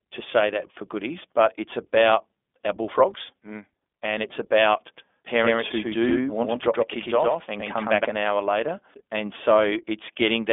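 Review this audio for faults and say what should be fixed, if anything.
iLBC codec, throughout: each 20 ms frame's excitation is coded on its own, so the speech sounds rough and slightly synthetic, confined to a 250 Hz to 3.5 kHz line band with nothing above 3.7 kHz. The damage is plainly audible and fits a 15.2 kbps mode. To prevent it, capture and pass the speech through a wideband codec rather than a narrowband VoIP path.

Doubled audio track, 4.97 to 8.05 s, from just after "mm and it's about" until "an hour later": a second full-band copy trails the original by about a tenth of a second at roughly equal level, starting and stopping abruptly without decay or room colour. This is likely a slower capture path or an edit leaving two copies. To prevent it, make sure only one capture path feeds the mix and check edits for overlapping duplicates.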